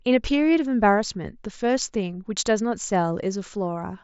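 No technical faults occur at any point in the speech, so there is nothing to describe in time order.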